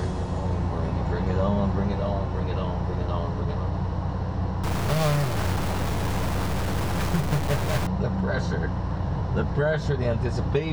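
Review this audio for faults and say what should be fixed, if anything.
From 4.63 to 7.87 s the audio goes harsh and buzzy with noisy gaps, likely a stuck bit: one high data bit held fixed, adding errors near -25 dBFS. To prevent it, check the converter and its digital data lines or connections, and replace any faulty cable or interface.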